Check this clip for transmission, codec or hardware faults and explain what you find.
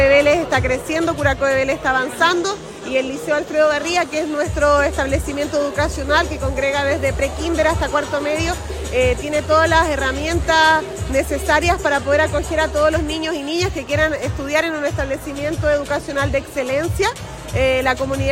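A mains buzz runs from 3.55 to 11.43 s. It is a steady, raspy tone built on 50 Hz harmonics, sitting well below the sound, roughly 30 dB down. Sharp switching spikes from a dimmer, rectifier or unshielded line enter twice per mains cycle. That spiky origin gives it the harsh edge that a smooth 50 Hz hum lacks.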